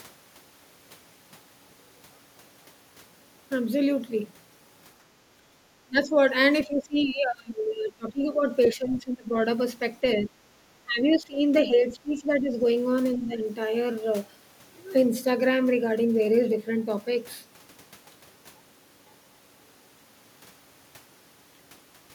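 At 5.51 to 5.59 s the background is gated by the echo canceller. While the loudspeaker plays, the canceller turns the microphone down by about 11 dB, so the room sound briefly dips and then returns when the canceller releases.

Speech suppressed in double talk follows at 5.87 to 6.17 s and 6.66 to 8.43 s. The talker's speech drops by around 20 dB. This is likely the canceller failing to separate the near talker from loudspeaker echo while both sides speak, and turning both down.

From 8.63 to 8.95 s the other side's voice leaks through faintly, at roughly 25 dB below the talker, likely residual loudspeaker echo the canceller did not remove. Overlapping this, further double-talk suppression runs from 8.74 to 9.35 s. More follows at 10.21 to 10.31 s, 10.66 to 12.53 s and 13.17 to 13.42 s, with the later drops shallower, around 10 to 15 dB.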